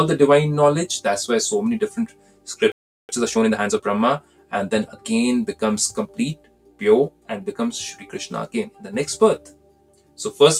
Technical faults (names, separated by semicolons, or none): noise suppressor applied to music or sounds; sound cut by the noise suppressor; playback stall; time-compressed catch-up